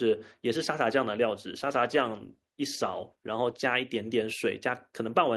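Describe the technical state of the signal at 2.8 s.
At 2.8 s the call is in a bitrate drop lasting from 1.63 to 3.69 s: the bandwidth estimate fell and the encoder was pushed from 64 kbps to 16 kbps. The speech is coded coarsely, with the highs cut away, so it sounds muffled and rough.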